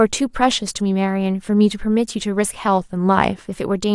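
From 2.68 to 3.47 s the speech slows about 6% and drops roughly a semitone, then snaps back, likely a drift correction step retiming the buffer.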